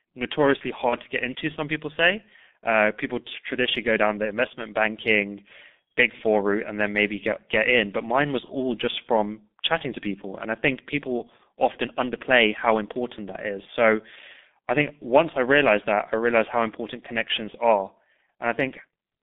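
Throughout the clip, the speech passes through the G.723.1 codec at a low rate, which fits roughly 6.3 kbit/s. The line band runs only from 200 Hz to 3.6 kHz, and the coarse, slowly updated voice model heavily damages the sound: the speech is muffled and hoarse, and its consonants are smeared.

At 0.89 to 0.96 s and again at 8.45 to 8.53 s there is VoIP packet loss concealed by the speech codec. Each gap fits a single lost 30 ms frame. The decoder fills it by extending its last pitch and filter with falling gain, so the speech is briefly stretched into a buzzy tone or coloured noise that fades before recovering.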